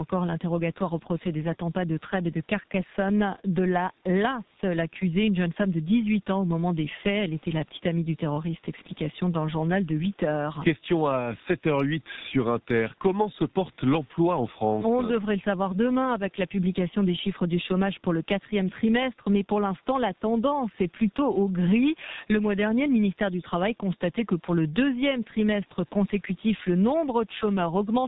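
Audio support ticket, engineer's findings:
G.723.1 codec damage, heavy, throughout. Speech muffled and hoarse. Consonants smeared. Nothing above 4 kHz. Coarse, slow-updating voice model blurs transitions, which fits 30 ms frames at roughly 6.3 kbit/s. Lowest bass trimmed by the call microphone path's high-pass, normal.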